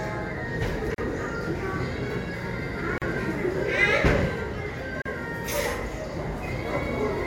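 Sound, with a gap at a join of encoded pieces at 0.94, 2.98 and 5.02 s. Each gap lasts about 37 ms, every 2 s, from untrimmed encoder padding.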